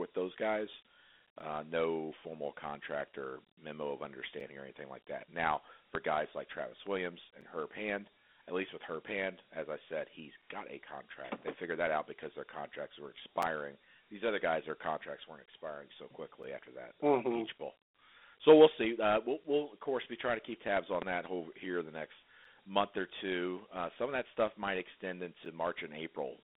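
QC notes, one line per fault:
Throughout: Dialogic VOX ADPCM. The speech is confined to a telephone band of roughly 250 Hz to 3.6 kHz, with nothing above 3.8 kHz. Plainly audible gritty hiss rides on the speech as the 4-bit adaptive quantiser tracks the signal coarsely, which fits 32 kbps OKI-style coding at 8 kHz.
1.40 s to 25.45 s: gap between chunks. A hard-edged dropout of about 7 ms recurs every 3.0 s, at 1.40, 4.40, 7.41, 10.42, 13.42, 16.43, 19.44, 22.45 and 25.45 s. One falls between "contract or memo of" and "or anything like that". Silence is inserted at each chunk boundary, so the audio stutters without losing material.
5.95 to 5.98 s: loud pop. A single sharp transient about 20 dB above the speech lands just before "guys like", and the speech continues underneath. It is likely a voltage step from a switch, plug or driver glitch, shaped into a brief click by the downstream circuitry.
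20.77 to 21.05 s: loud pop. Two distinct pops, about 15 dB above the speech, fall between "be trying to keep" and "that whole here the", spaced across roughly 0.28 s, and the speech carries on beneath them. The double impulse points to a likely repeated electrical discharge or contact glitch.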